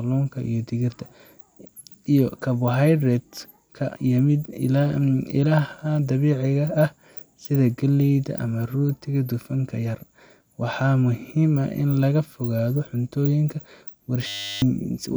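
A system hang loop occurs from 14.27 to 14.62 s, near the end of the speech. The computer or audio driver stalled while the sound hardware kept replaying the last chunk in its ring buffer, so a 10 ms slice repeats about 35 times. Because the loop is so short, it fuses into a steady buzz at 100 Hz rather than a stutter, and roughly 0.4 s of the speech is lost beneath it.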